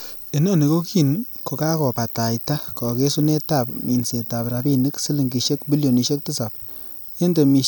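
No technical faults can be heard anywhere in the recording.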